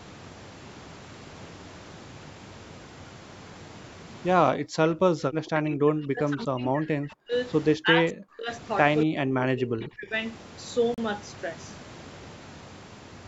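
Speech recorded on a call. An echo canceller likely confused double talk with loudspeaker echo, suppressing speech at 4.53–7.33, 7.77–8.5 and 9.04–10.14 s, with drops of about 40, 40 and 35 dB. Later, a Bluetooth stall, likely from packets delayed by interference, drains the headphone buffer and cuts the sound to silence for 37 ms at 10.94–10.98 s.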